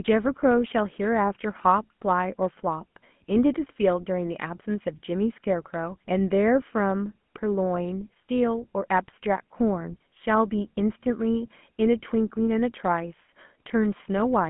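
Speech runs through the whole clip with the GSM full-rate codec's damage plainly audible. The line band spans about 150 Hz to 3.4 kHz, with nothing above 3.8 kHz. The pulse-driven vocal-tract model leaves a buzzy, gravelly roughness, which fits a 13 kbps GSM full-rate encode.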